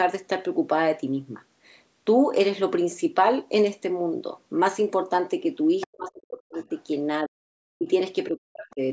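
A faint scrap of a second voice surfaces at 5.81 to 5.87 s, roughly 15 dB under the speech, and again more quietly at 6.6 to 6.82 s, around 35 dB down. This is the other side's voice leaking through, likely loudspeaker echo the echo canceller failed to remove from the microphone.

From 5.86 to 6.6 s the speech sinks by as much as 40 dB, then drops out again at 7.25 to 7.51 s, 7.75 to 7.88 s and 8.3 to 8.81 s. This is speech suppressed in double talk, likely because the canceller could not separate the talker from the echo and turned both down.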